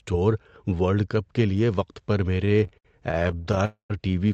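Right after "کے لیے وقت پر", from 2.45 to 3.61 s, packets kept arriving late and the jitter buffer ran dry 22 times. This is repeated stalls (stutter): the audio drags through 301 ms of stretched, continued sound, with gaps up to 68 ms. From 3.65 to 3.92 s, a call audio freeze, likely from packets held up in transit, inserts about 245 ms: a fading continuation, then 110 ms of silence before the audio resumes.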